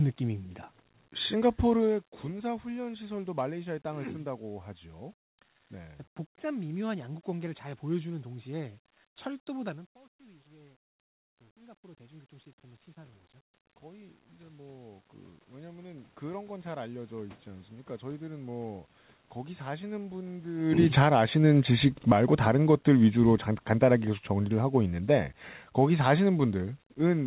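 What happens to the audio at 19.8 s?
Nothing goes wrong at 19.8 s; the audio passes through intact at that point.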